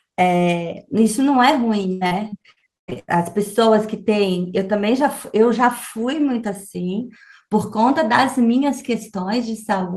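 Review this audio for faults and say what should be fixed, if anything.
From 1.93 s to 3.10 s the speech turns choppy, with chunks missing. This is repeated packet loss: roughly ten holes, the longest 118 ms, were patched by stretching the preceding sound, so about 42% of that stretch is filler. Prevent it with a steadier network path, a larger jitter buffer, or forward error correction on the stream.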